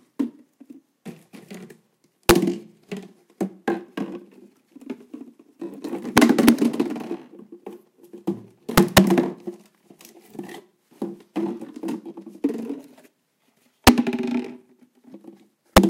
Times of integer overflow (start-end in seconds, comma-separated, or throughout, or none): 2.29, 6.18-6.49, 8.78-8.98, 13.87, 15.77